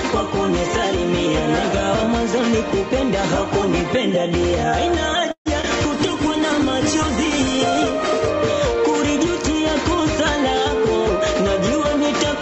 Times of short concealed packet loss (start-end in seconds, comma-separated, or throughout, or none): none